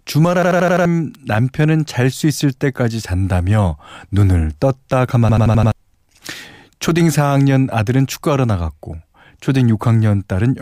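A system hang loop strikes at 0.43 to 0.85 s and again at 5.29 to 5.72 s in this speech. Each time the computer or driver stalled while the sound hardware kept replaying its ring buffer, so one 85 ms slice of audio repeats exactly five times, at 11.7 per second. That length fits a 4096-sample buffer. The result is a rapid machine-gun stutter, and about 0.4 s of the real speech is lost at each point.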